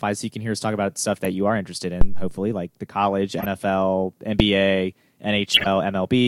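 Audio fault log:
1.25, 3.38–3.46, 4.40 and 5.54–5.67 s, corrupt frame decoded: short chirps and blips of misplaced energy, the first right after "us talk about stuff" and the second after "like the college". They grow louder across the clip, peaking near -15, -10, -5 and -5 dBFS, and each spans a few damaged frames. Flipped bits gave the decoder wrong gains or codes, so each frame it played put energy at the wrong frequencies for about a frame's length.
2.01–2.40 s, phantom power thump: a deep, low thump between "you are interested" and "like the college", dying away quickly with a decay of about 87 ms. A supply, phantom power or similar, was switched on a live input, and that sudden DC step passed through the coupling capacitors as a single low-frequency pulse that settles as the capacitors recharge.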